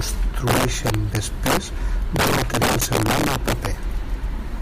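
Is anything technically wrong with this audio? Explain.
Yes. The speech clip has two faults.

Integer overflow runs throughout. Loud peaks are pushed about 8 dB past the largest value the integer format can hold. Instead of being limited, those samples wrap around to the opposite extreme. This hits a few percent of samples, so each loud moment throws the waveform across its full range. The result is harsh, violent cracks on the loudest parts of the speech, far sharper and more jarring than ordinary clipping.

An overlap between stream segments occurs at 0.40 s. The time stamps of two consecutive pieces of the stream claim the same short stretch of time, and the player discards that stretch even though the sound in it was not actually duplicated. Roughly 18 ms of audio disappears, and the waveform jumps across the gap. It is heard as a single click or tiny skip. The spacing fits a stream cut into 2-second segments.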